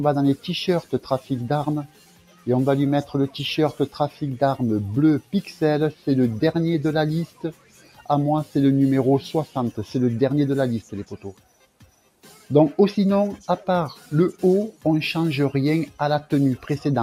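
Throughout the clip, a noise suppressor built for speech is working on sound it was not designed for, treating sustained tones, ambience and decay as noise. The level swings by something like 10 dB as it reacts, so held material thins and pumps while onsets come through largely intact. Unlike a compressor's pumping, which follows overall loudness, these dips track how steady the sound is, with transients left alone and the body beneath them sinking.

Four stretches show the sound being cut hardest by the noise suppressor: 1.87 to 2.47 s, dropping by about 12 dB; 7.27 to 8.09 s, about 11 dB; 10.82 to 12.5 s, about 12 dB and the longest at well over a second; and a brief 13.96 to 14.11 s dip of about 7 dB. Tails shorten and sustained parts sag rather than going silent.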